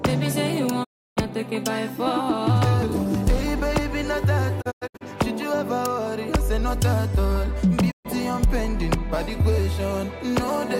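At 0.83 s a digital broadcast dropout fades the sound out over about 20 ms and holds silence for 0.32 s. The receiver has lost good frames and muted. At 4.60 s the gaps are scattered across 0.38 s, the longest about 0.1 s. At 7.90 s a 0.13 s hole follows, which fits 32 ms frames dropping. Spectrograms show blank vertical bands; waveforms flatten to near silence between short ramps.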